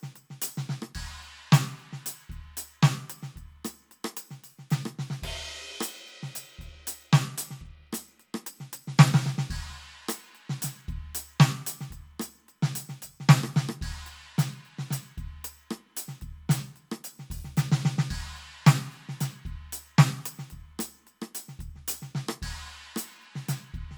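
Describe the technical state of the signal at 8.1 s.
At 8.1 s the music is inside a Bluetooth SBC bit pool drop running from 7.25 to 9.08 s. The encoder is starved of bits, so the top sub-bands lose their allocation and the rest are coarsely quantised, consistent with the bit pool falling from 31 to 16, around 110 kbps. Treble turns dull and gritty noise rises.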